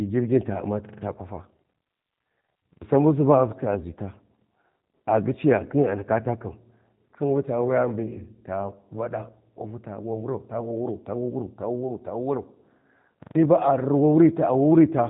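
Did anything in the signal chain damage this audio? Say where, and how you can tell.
Yes. The damage happened at the codec stage: a G.729 speech coder, likely the G.729A variant, was used for the whole clip, and the sound fits an 8 kbit/s coder. Nothing above 3.8 kHz survives, so the speech is dull and band-limited throughout. The speech is rebuilt from a vocal tract filter, a pitch predictor and a few pulses per frame, so it comes out plainly rough and synthetic while staying intelligible.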